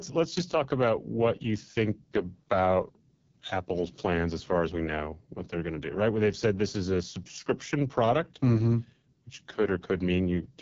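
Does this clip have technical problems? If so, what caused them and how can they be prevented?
Yes. AMR wideband (HD Voice) codec damage runs throughout the speech. It sounds rough and raspy, fitting the lowest rate near 6.6 kbit/s, with nothing above 7.3 kHz. Encode at 12.65 kbit/s or higher to prevent it.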